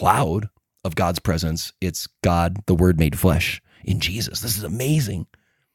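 Nothing in this bit of speech stands out as a technical fault, so there's nothing here to flag.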